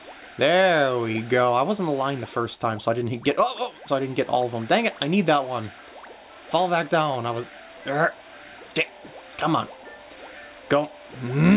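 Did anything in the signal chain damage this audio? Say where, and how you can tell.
No, nothing in the signal chain damaged this audio, and there is no point in it where damage can be heard.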